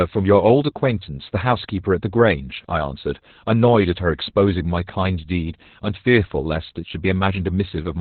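Opus voice compression throughout: nothing above 4.2 kHz survives, and coarse coding leaves speech muffled, hoarse and slightly robotic, fitting narrowband SILK near 8 kbps.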